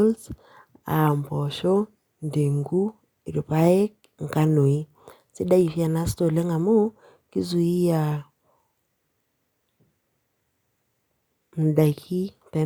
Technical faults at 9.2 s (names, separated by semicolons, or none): none